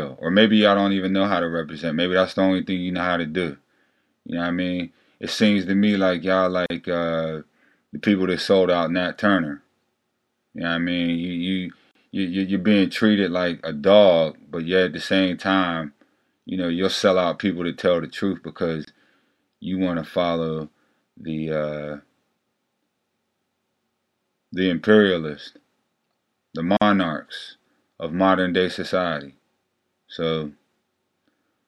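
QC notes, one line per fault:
6.66 to 26.82 s, gaps at joins of encoded pieces: short silences at 6.66, 11.91, 18.85 and 26.77 s, lasting 41, 39, 27 and 46 ms. Each piece was encoded separately and butted together untrimmed, so start-up delay and end padding leave a hole with smeared edges before the sound picks up where it stopped.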